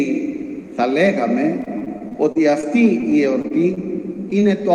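From 1.61 to 2.65 s, and again from 3.01 to 3.79 s, there is repeated packet loss with a robotic sound. Short holes keep opening, the longest about 33 ms. Each is patched by extending the previous sound. About 17% and then 13% of those stretches is filler, so the sound turns choppy, with pieces missing.

From 4.39 to 4.43 s comes a short concealed packet loss. About 20 ms of audio never arrived in time. The decoder stretched the preceding sound across the hole and then blended back in. It sounds like a brief smear or wobble.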